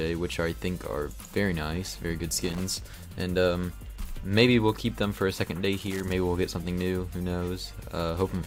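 A worn or dirty contact making and breaking as it shifts causes loose connector crackle, chopping the signal into irregular bursts of scratchy crackle. It happens twice in the audio, from 2.45 to 2.61 s and again from 5.82 to 6.12 s.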